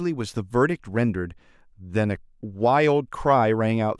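No technical faults can be heard anywhere in the recording.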